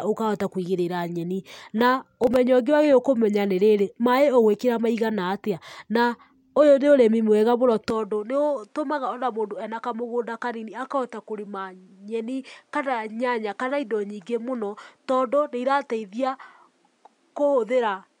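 A speech recording with two faults. From 2.17 to 2.36 s the processor fell behind and missed several audio deadlines in a row, each leaving a tiny silent hole. The result is a brief burst of processor overload crackle, and its grain suggests very short buffers of around 1.5 ms. From 7.90 s to the end the input was likely switched to a poorer device, with no gap at the change. The sound becomes duller, with nothing above 11.4 kHz, drops by about 5 dB and gains a new background noise floor roughly 40 dB below the speech.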